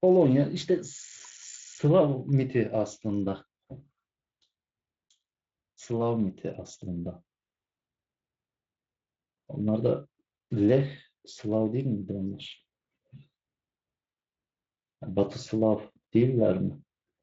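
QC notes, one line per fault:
The speech comes through a Speex-coded path with its band reaching to about 7.6 kHz, and nothing in the signal stands out as a defect.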